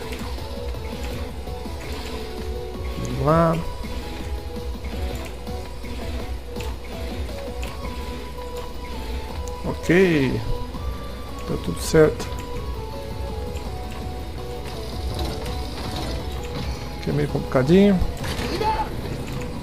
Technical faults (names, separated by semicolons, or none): none